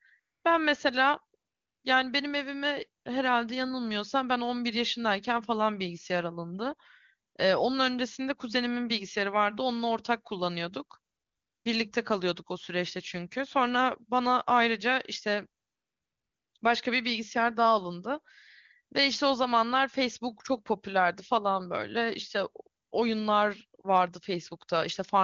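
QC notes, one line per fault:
0.19–0.43 s, 1.39–1.83 s, 3.03 s, 7.29–7.35 s, 11.13–11.65 s, 15.63–16.53 s, 16.57–16.61 s, 22.83–22.91 s: AMR comfort noise. Each pause, from 20 ms up to 900 ms, loses its real background. The phone judged the line silent and stopped sending speech frames. The receiver fills the gap with smooth synthetic hiss, which switches in and out against the clean wideband sound.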